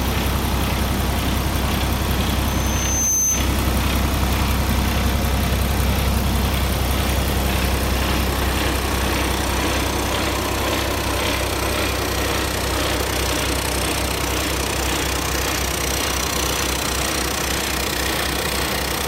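A microphone picked up the loudspeaker it was feeding, and the loop ran away at 6.2 kHz, causing loudspeaker feedback squeal from 2.47 to 3.56 s: a thin, piercing tone that swells within a second to sit a few decibels above the surrounding sound, then cuts off.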